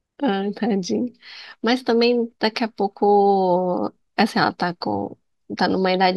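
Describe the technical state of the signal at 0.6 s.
At 0.6 s the speech signal is intact, with no technical fault present at that moment.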